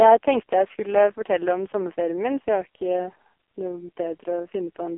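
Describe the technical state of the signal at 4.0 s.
At 4.0 s, as throughout, the AMR narrowband mobile codec rebuilds the speech from a vocal-tract model fed by sparse pulses, which fits its lowest 4.75 kbps mode. Nothing passes above 3.5 kHz, and the heavy damage sounds buzzy and synthetic. A plain telephone filter would only muffle.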